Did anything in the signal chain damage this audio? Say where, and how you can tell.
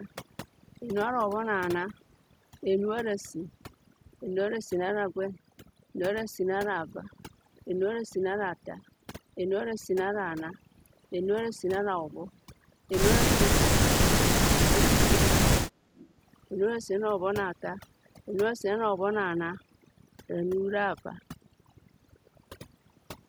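Yes. Overdone noise removal, in the call processing stage, runs through the whole clip. The background collapses to near silence with twinkling specks, because frequency bands near the noise estimate are pulled right down along with quieter speech detail.

Speech suppressed in double talk, also call processing, hits 13.36–13.98 s and 14.6–16.0 s. The speech drops by roughly 40 dB, fading or breaking up. The likely cause is an echo canceller that could not separate near speech from far-end echo and attenuated both.

An echo leak follows at 16.0–16.08 s: a brief, faint copy of the speech arrives 329 ms late, about 25 dB below the direct signal. This likely comes from residual loudspeaker pickup that the echo canceller failed to remove and sent back down the call.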